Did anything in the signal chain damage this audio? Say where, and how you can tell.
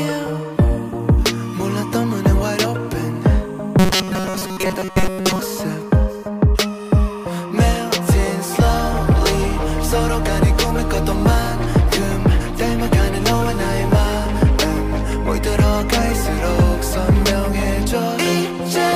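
Yes. From 3.79 to 5.39 s the sound turns rigid and metallic, locked onto a steady buzz at 188 Hz while still loosely tracing the underlying audio. This is robotic sound from repeated short buffers, most likely at the driver or buffer stage: fresh audio arrived too slowly, so a segment of about 5.3 ms (one over 188 Hz) was replayed to fill the gaps, with roughly 70% of that stretch made of repeats instead of new material.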